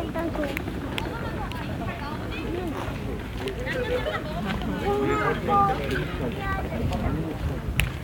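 No technical faults are audible.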